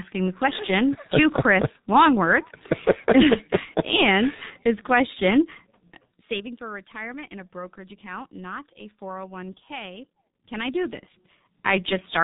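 Throughout the speech, heavy G.723.1 codec damage, consistent with roughly 6 kbit/s coding: nothing above 3.8 kHz, slow frame-based modelling, muffled, hoarse tone and smeared consonants.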